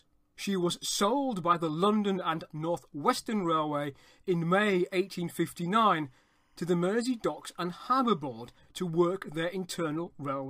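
From 4.64 s to 8.61 s, timecode bleed sits behind the sound. Linear timecode from a nearby track or cable has leaked into the audio path. Its square wave flips between two pitches, around 1 kHz and 2 kHz. The result is a thin, steady chirping warble. The pattern repeats 25 times a second, which fits 25-frame timecode. It is very quiet, roughly 45 dB below the main signal, so it is easiest to catch in quieter moments.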